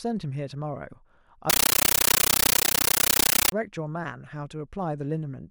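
From 1.50 s to 3.52 s the speech gives way to a compressed stream played as audio. An AC-3 bitstream, likely a high-rate one around 640 kbps, got treated as plain PCM instead of being decoded. So you hear each frame's data as a 13.3 ms burst of harsh noise followed by silent padding, repeating 31.25 times a second. The result is a very loud, chattering static that completely replaces the sound for those two seconds.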